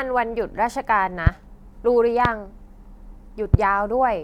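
Sharp, single pops cut through the speech at 1.27 to 1.30 s, 2.25 to 2.28 s and 3.54 to 3.57 s, each roughly 20 dB above the speech, which continues underneath. This is a loud pop, likely from a brief voltage pulse from a switch, static or driver glitch.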